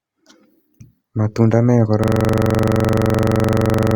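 From 2.04 s to the very end, the speech collapses into a rapid, mechanical stutter: one 42.67 ms fragment of sound repeats exactly, dozens of times, at about 23.4 Hz, giving a coarse buzzing rattle instead of continuing audio. This is a system hang loop. The computer or driver stopped supplying new audio while the sound hardware kept replaying its ring buffer, whose length fits a 2048-sample buffer.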